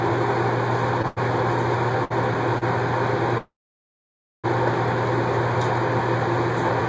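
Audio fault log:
1.02–1.06, 1.08–1.19, 2.05–2.12 and 2.58–2.64 s: short stall from a late packet. The last sound is held 18 to 88 ms with a slight buzz or dip, then the audio resumes where it stopped. It is too brief to become a freeze.
3.38–4.46 s: call audio freeze. A fading buzz or hiss gives way to 0.92 s of silence, likely from packets held up that emptied the jitter buffer. The audio then continues with nothing missing, unlike a dropout.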